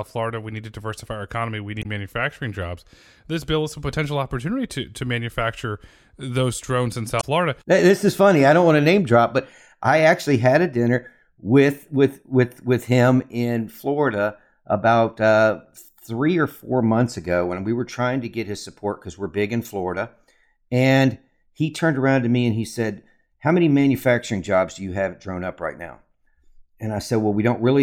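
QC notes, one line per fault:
1.79–1.86 s and 7.17–7.24 s, damaged data in a compressed stream: a 70 ms glitch lands just before "manufacturing jobs" and again after "manufacture those drones in", where corrupt frames are misdecoded until the decoder resyncs.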